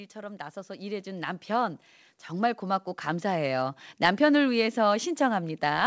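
From 0.12 to 3.86 s, automatic gain rising lifts the level by about 13 dB. Background swells with the speech, unlike a talker moving closer.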